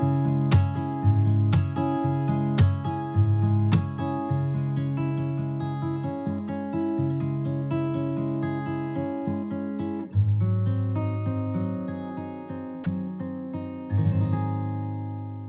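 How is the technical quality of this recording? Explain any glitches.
There is one brief glitch, at 12.84 s: the sound cuts out for about 20 ms and a short patch of steady, featureless noise takes its place before the original audio resumes. The likely cause is sound dropped by the voice detector. The sender judged that instant to be background and stopped transmitting, so the receiver inserted synthetic comfort noise. The audio has nothing above 4 kHz, which fits a narrowband telephone codec such as G.711.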